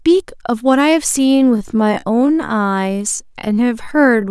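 From about 1.13 s to the end, the speech suddenly slows to roughly 0.63 times its normal pace while its pitch stays the same, leaving it dragging. This is a time-stretched section, likely from software lengthening the audio by repeating short slices to fill a target duration.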